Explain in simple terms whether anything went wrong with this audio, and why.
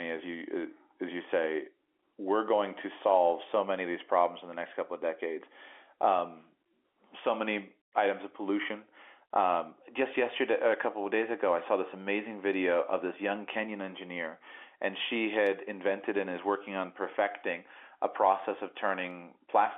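Nothing went wrong that I could hear: listening closely, nothing in this telephone-quality speech recording stood out as a problem.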